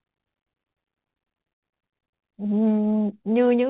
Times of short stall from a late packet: 1.56-1.66

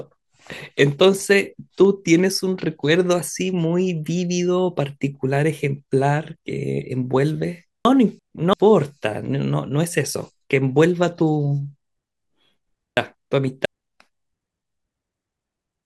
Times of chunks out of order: 7.85-8.53, 12.97-13.65

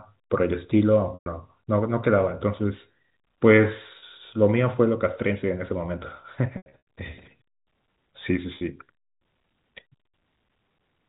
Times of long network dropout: none

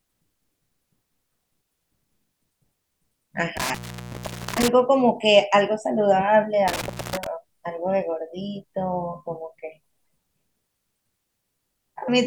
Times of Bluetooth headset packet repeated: none

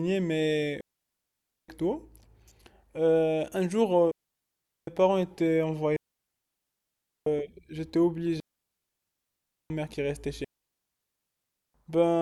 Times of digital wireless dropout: 0.81-1.68, 4.11-4.87, 5.96-7.26, 8.40-9.70, 10.44-11.74

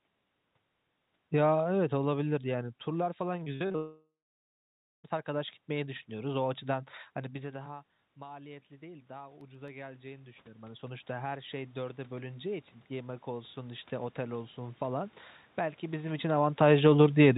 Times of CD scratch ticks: 9.28-9.81

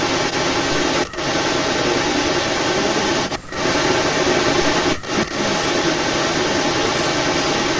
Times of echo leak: 0.00-7.80

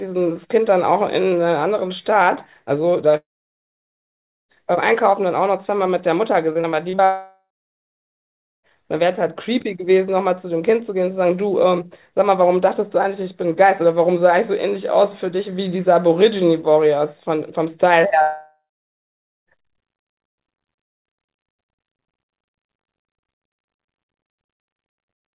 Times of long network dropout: 3.17-4.51, 7.05-8.66, 18.22-19.49

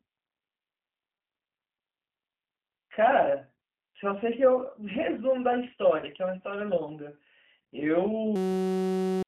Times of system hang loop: 8.36-9.23

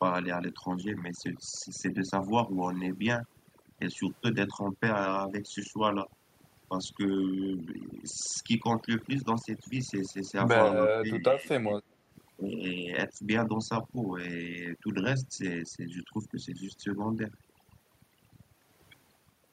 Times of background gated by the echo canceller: 12.06-12.11

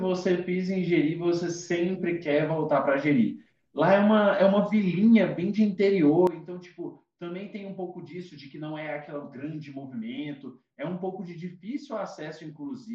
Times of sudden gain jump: 6.27-12.94

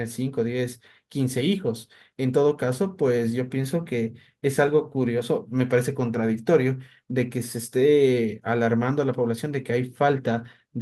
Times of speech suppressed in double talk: none

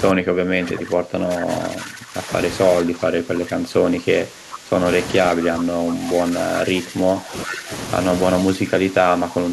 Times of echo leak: 7.44-7.57

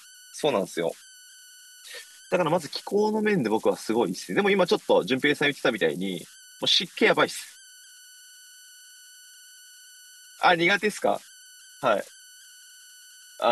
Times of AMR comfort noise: none

